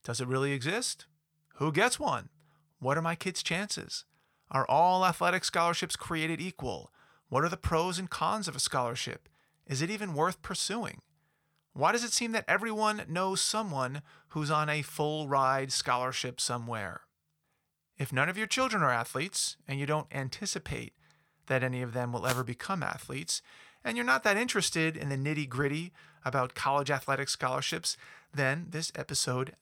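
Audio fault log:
22.23–22.44 s and 27.67–27.74 s, wireless microphone noise hit: brief bursts of static swish over the speech, after "any of them will" and after "gritty about college athletic". The analogue FM radio link fades as reflected paths cancel, letting receiver noise rise and briefly mask the speech.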